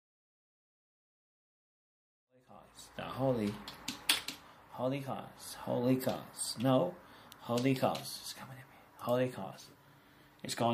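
There are no technical faults to describe in this clip.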